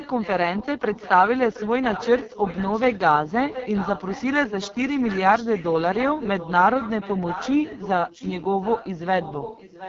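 Throughout, the AMR wideband (HD Voice) codec sounds rough and raspy, which fits its lowest 6.6 kbit/s mode, with nothing above 7.3 kHz. An echo leak returns the speech about 0.72 s late, at 0.0–2.99 s, 3.27–3.31 s, 3.48–4.25 s, 4.46–5.75 s, 5.91–6.52 s, 6.7–7.89 s and 8.08–9.89 s. The echo is moderately quiet, faint at 3.27 s and loudest near 6 s, likely from a loudspeaker echo canceller failing.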